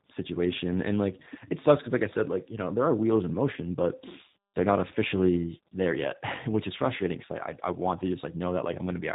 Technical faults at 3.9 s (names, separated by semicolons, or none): tandem speech coding